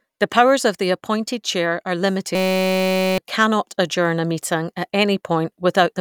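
Speech with a system hang loop from 2.35 to 3.18 s: one 5.33 ms slice repeats exactly, making a steady 188 Hz buzz rather than silence or a stutter, which fits a 256-sample buffer replaying while the system froze.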